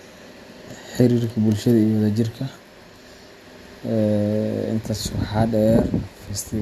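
No technical faults are audible anywhere in the speech recording.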